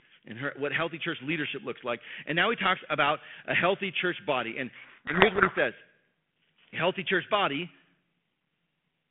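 From 4.76 to 5.59 s, harsh distortion buries the speech. This is a codec payload misread: each G.726 code word is unpacked in the wrong bit order.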